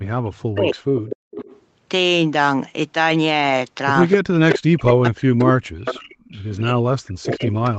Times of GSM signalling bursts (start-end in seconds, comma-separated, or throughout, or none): none